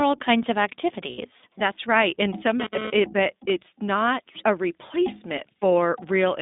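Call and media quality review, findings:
iLBC codec, full clip: narrowband speech, band limited to about 200 Hz to 3.7 kHz, rough and synthetic. Fits 20 ms iLBC frames at 15.2 kbps, not bandwidth-only filtering.

Lost iLBC frames, 1.10–1.20 s after "kinds of" and 5.58–5.64 s: brief held, buzzy vowel, not silence. Fits four then two 20 ms frames concealed. Recovers immediately.

GSM phone buzz, 2.60–3.50 s, ending before "not a": hard raspy 217 Hz buzz with many harmonics, intermittent, about 5 dB below speech. Not mains hum; likely a handset transferring data.

Pre-emphasis left on, 4.70 s to end, after "not a": thin, bright, sibilant tilt rising to about 10 dB at 10 kHz versus 1 kHz. Fits an uncorrected 50 µs FM curve.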